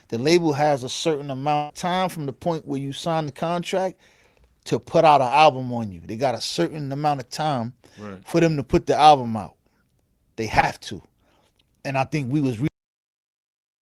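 Burst of packet loss, 1.55 to 1.72 s: a run of packets carrying about 140 ms of speech was lost or arrived too late to play. The receiver filled roughly 142 ms by extending the last sound and fading it, so the speech turns into a held buzz or a dying hiss. It then picks up again further on, with that stretch of speech simply gone.

Short concealed packet loss, 3.26 to 3.29 s and again at 10.61 to 10.64 s: each time about 20 ms of the stream failed to reach the decoder in time. The receiver covered the hole with a brief continuation of the preceding sound, about 13 ms the first time and 18 ms the second, before blending back into the real signal. Each one comes across as a quick smear or wobble in the speech, and a short consonant there can drop out.

Cut-off end, at 12.68 s: the final buffers of the recording were never written or played out, so the speech stops abruptly partway through a sound. 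There is no natural decay or tail. The level falls straight to digital silence, which stays unbroken until the end of the file.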